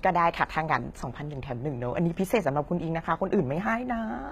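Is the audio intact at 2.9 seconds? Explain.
No. Throughout the speech, HE-AAC compression is likely, consistent with roughly 20 kbps: treble above 14.9 kHz is gone, and the replicated highs make sibilants sound gritty and metallic.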